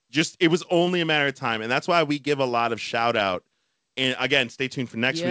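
Speech recording with no audible technical faults.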